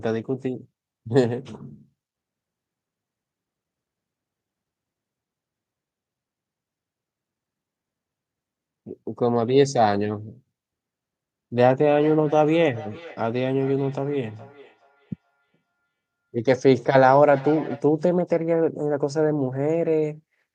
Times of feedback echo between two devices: 11.94-17.88

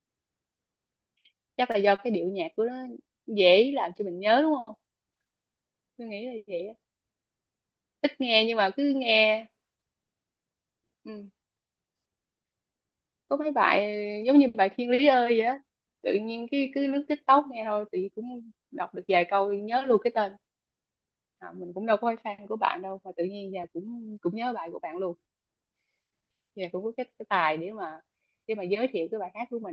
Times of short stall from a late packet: 1.71-2.00

